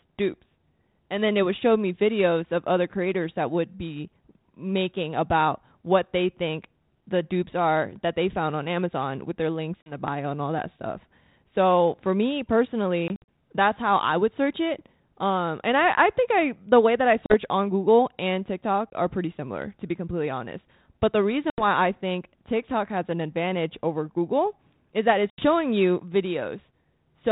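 Speech over a G.726 ADPCM telephone link has packet loss at 9.82 s (after "with their links"), 13.08–13.28 s (scattered), 17.26 s (after "the way that I"), 18.90 s, 21.5 s (before "I think") and 25.3 s. Each is hard-edged silence totalling 20–120 ms. Unlike a clean dropout, the speech comes back slightly distorted, at times with a click or at the wrong level, for some tens of milliseconds while the decoder's predictor and step size resynchronise.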